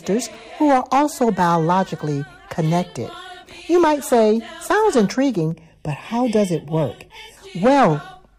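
From 5.51 to 7.37 s the audio turns hollow and phasey, as if heard through a tube, with a scooped quality in the upper mids. This is channel delay (comb filtering): one channel runs late by a fraction of a millisecond, and when the two are summed to mono the shared content cancels at regularly spaced frequencies. Here the first notch falls around 1.5 kHz, with further fixed notches repeating evenly above it.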